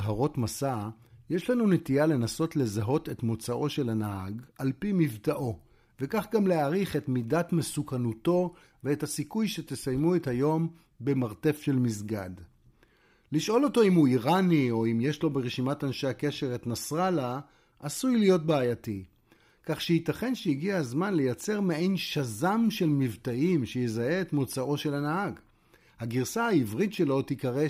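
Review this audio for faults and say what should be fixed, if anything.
Nothing here needs fixing: I listened all the way through this speech recording and didn't hear a single fault worth flagging.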